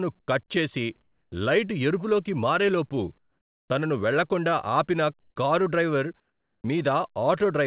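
The speech comes over a narrowband line, with nothing above 4 kHz, which fits a G.711 call codec. At 0.2 to 0.28 s, just before "కట్ చేసి", comfort noise in place of the background appears. The quiet background, about 45 dB below the loudest speech, turns into a flat, featureless hiss about 18 dB lower. The likely cause is the sender going silent in the pause while the receiver fills the gap with synthetic noise. It happens again at 1.02 to 1.32 s, about 11 dB down. At 1.3 s the next sound starts abruptly, without its soft beginning. This is likely an onset clipped by the voice detector: about 20 ms were probably not sent, and hiss filled their place. From 3.18 to 3.7 s, between "లైట్ ఎరుపులోకి మారే లోపు" and "తనను వెళ్లకుండా ఆపిన కారు", the background is again replaced, about 13 dB quieter. The same happens at 5.2 to 5.36 s, about 6 dB down, and at 6.2 to 6.64 s, about 18 dB down. At 6.62 s, after "వెళ్లకుండా ఆపిన కారు డ్రైవర్", the onset is clipped again by about 20 ms.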